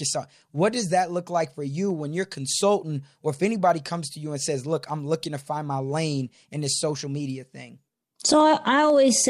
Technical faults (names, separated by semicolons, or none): periodic USB or driver dropouts